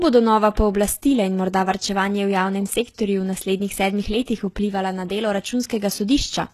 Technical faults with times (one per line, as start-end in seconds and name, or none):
0.00-6.53 HE-AAC compression